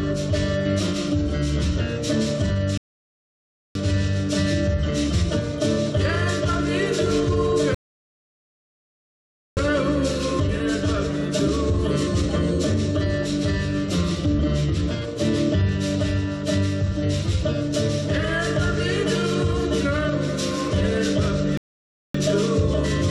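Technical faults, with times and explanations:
2.78–3.75 s, 7.75–9.57 s and 21.57–22.15 s: rebuffering stall. The player ran dry of downloaded audio three times and simply waited, so the sound drops to dead silence for about 0.98 s, 1.82 s and 0.57 s, then carries on from exactly the point it left off. Nothing gets skipped; the gaps just push everything later, adding roughly 3.4 s to the running time in total.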